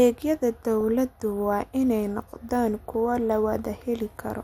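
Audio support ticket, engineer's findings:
MP2 compression, whole clip. Speech sounds dull, top end missing. Upper sub-bands drop out and flicker back. Gurgling, granular grain on the remaining bands. Likely cause is MPEG Layer II encoding at a low rate, which fits about 80 kbps. Too few bits for the 32 sub-bands, so high bands get switched off. The bands still coded are coarsely quantised. Damage is plainly audible throughout.

DAB burbling, 0.81 to 1.53 s, just before "in ay noqdaan kuwo". Burbling noise blips over the speech. Component: DAB reception path feeding the MP2 decoder. Residual bit errors get past error correction. The error rate is low, well under one percent. Corrupted samples put short noise blips in single sub-bands; corrupted scale factors make sub-bands jump in level for up to a frame. 41 frames are affected.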